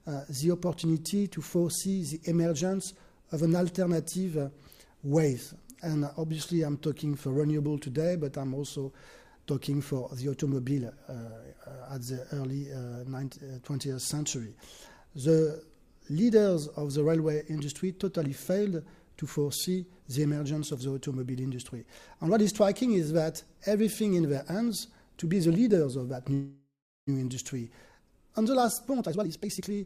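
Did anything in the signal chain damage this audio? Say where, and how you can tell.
Yes. A call audio freeze at 26.33–27.09 s points to the network stage, most likely packets held up until the jitter buffer emptied. The last sound is stretched into a fading buzz, then about 0.32 s of silence. On a spectrogram this shows as smeared, repeating bands that decay to blank. Playback then resumes where it stopped, adding 738 ms of delay without losing audio.

A jitter buffer speed-up runs from 28.39 to 29.75 s, at the receiver's buffer stage. Once the backlog arrives, the audio plays at 134% speed with unchanged pitch as short pitch-period chunks are cut, roughly half a second in total. The spectrogram keeps the harmonic spacing while events crowd closer together, and the waveform shows repeated small splices.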